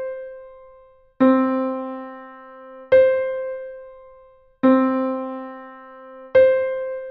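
Nothing goes wrong anywhere along the way, so there's no technical fault to point to at any moment in the clip.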